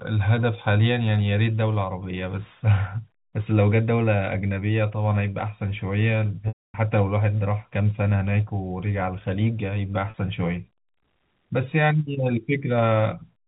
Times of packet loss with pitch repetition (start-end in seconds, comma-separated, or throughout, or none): 6.48-6.74, 10.10-10.14